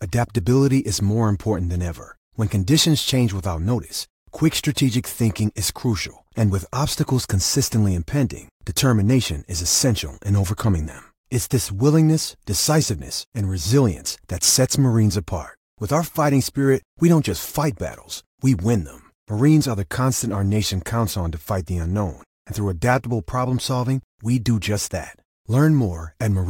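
From start to finish, a faint hiss and grainy roughness ride on the speech, swelling on louder passages and on bright sibilant sounds and dropping away in the pauses. This is sample clock jitter: the converter's clock wanders by a few microseconds, so each sample is captured slightly off time. Where the waveform changes fastest, that timing slip becomes an amplitude error, here sitting roughly 30 dB below the speech.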